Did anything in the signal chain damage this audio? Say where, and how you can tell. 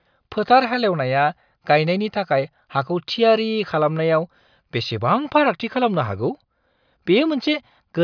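No, nothing in the signal chain audibly damages this speech recording; the signal stays continuous and stable with no audible breaks, level problems or distortion introduced at any stage.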